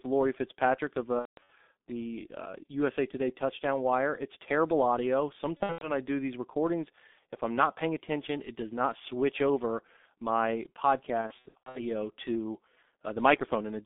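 Throughout, heavy G.723.1 codec coding at 6.3 kbit/s limits the line to 200 Hz–3.6 kHz, leaving the speech muffled and hoarse with smeared consonants.

VoIP packet loss concealed by the speech codec occurs at 1.19–1.50 s before "the uh", at 5.57–5.91 s between "terrible audio" and "I do these recordings", and at 11.21–11.79 s after "not switch over my". In each, the decoder stretches its last pitch and filter into a fading buzzy tone or coloured noise, and the speech stays weak afterwards.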